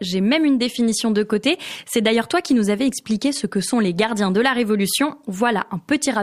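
No technical faults can be heard at any point in the recording.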